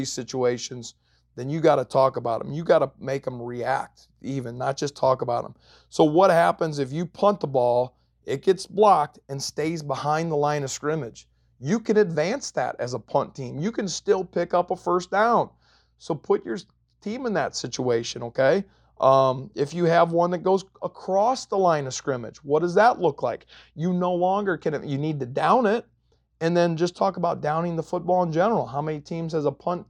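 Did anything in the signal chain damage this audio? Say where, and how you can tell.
Yes. From 11.85 s, right after "line of scrimmage you", to the end of the clip, the speech turns dull at the top end. That's channel delay comb filtering. One channel runs a couple of samples late, roughly 0.04 ms, and the two get summed to mono, so the shared content cancels at evenly spaced frequencies starting up around 10 kHz. A notch that high points to a tiny driver or buffer misalignment in the summing stage.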